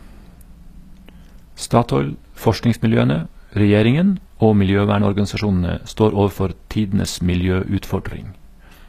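A speech clip whose upper range sounds synthetic throughout, with s sounds coming out gritty and lispy and the treble bright but metallic, while nothing at all comes through above 14.9 kHz. This is likely HE-AAC compression: the codec keeps only the lower spectrum and rebuilds the highs by copying lower bands upward under a coarse envelope, so the regenerated harmonics misalign with the real ones. The plainly audible damage fits a low bitrate around 24 kbps.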